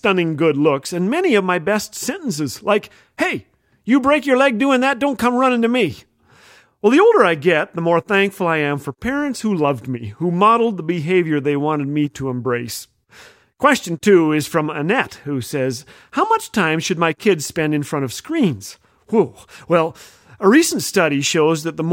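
No technical faults audible anywhere in the speech; nothing to flag.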